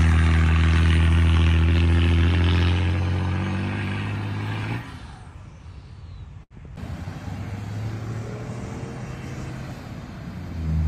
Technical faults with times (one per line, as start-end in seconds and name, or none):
6.43-6.54 short stall from a late packet